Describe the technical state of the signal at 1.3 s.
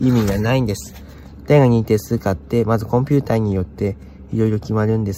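The audio at 1.3 s is intact, with no fault at that point.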